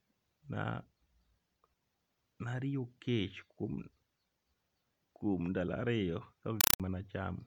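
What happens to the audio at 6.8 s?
At 6.8 s the loud chattering static that replaced the speech is just ending, the sound of a compressed stream played as audio, running from 6.61 to 6.80 s. The link data, whose pattern fits an AC-3 stream at 192 kbps, was treated as plain samples rather than decoded, so each frame arrives as a 4 ms burst of noise followed by silence, 31.25 times a second. The waveform shows a train of dense blocks separated by flat gaps, and the spectrogram shows evenly spaced vertical broadband stripes.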